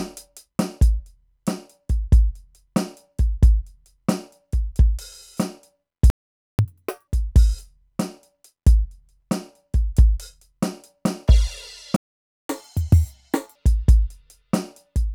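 A playback stall at 6.10 s silences the music for about 0.49 s, likely because the player ran out of buffered data. Catch-up at higher speed follows from 6.59 to 7.08 s: the backlog plays at 2× speed, pitch jumping about ten semitones. A second playback stall at 11.96 s cuts out for about 0.53 s, likely from the same buffer underrun. Catch-up at 1.5× from 12.49 to 13.55 s then lifts pitch about seven semitones before returning to normal.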